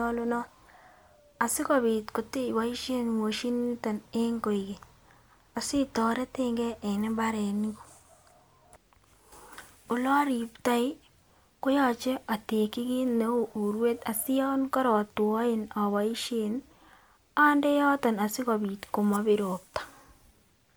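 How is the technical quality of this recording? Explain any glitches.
The recording is technically intact, with no faults audible at any point in the speech.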